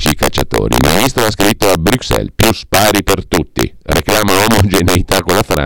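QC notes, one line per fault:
Throughout, integer overflow: the speech is pushed about 6 dB past full scale, and the few percent of peaks that exceed it wrap to the opposite sign instead of being limited, giving violent, full-range cracks on loud syllables, far harsher than clipping's flattened buzz.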